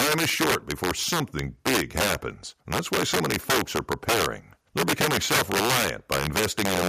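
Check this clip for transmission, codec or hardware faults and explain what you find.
Integer overflow runs through the whole clip. The speech is driven about 10 dB past full scale. A few percent of samples exceed the integer limit, wrap to the opposite sign and jump across the full range, producing violent cracks on loud syllables, far harsher than clipping.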